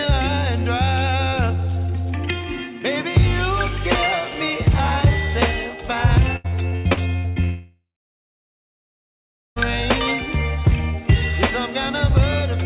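From 6.36 to 7.39 s there is repeated packet loss, giving a robotic sound: seven short gaps, the longest 87 ms, each patched by extending the previous sound, so about 43% of that stretch is filled-in material. The result is choppy, with sound returning between holes.

From 7.44 to 9.59 s comes a long network dropout, the likely cause of a single unbroken gap. The last sound is stretched briefly, then gives way to about 1.7 s of silence before audio resumes with the missing section gone. Unlike the stutter, nothing real comes through.

Throughout, nothing is heard above 4 kHz, consistent with a G.711 mu-law call path at 64 kbps.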